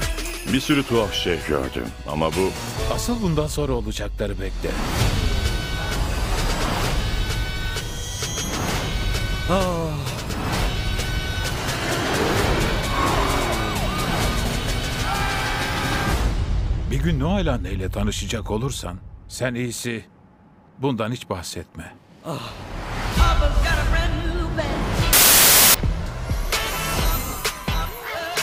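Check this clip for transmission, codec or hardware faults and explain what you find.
One fault turns up: a wrong sample width from 25.13 to 25.74 s. The data were unpacked three bytes per sample instead of four, which fits 32-bit data read as packed 24-bit, so most values mix bytes from neighbouring samples. That span becomes loud noise with the original sound buried inside, slowed to 0.75 times speed and lower in pitch.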